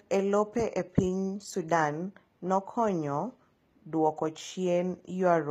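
From start to end, the treble sounds synthetic, and nothing reaches above 14.8 kHz. The likely cause is HE-AAC compression at a low bitrate near 20 kbps. The upper band is rebuilt from copied lower bands. The damage is plainly audible: s sounds turn gritty and lispy.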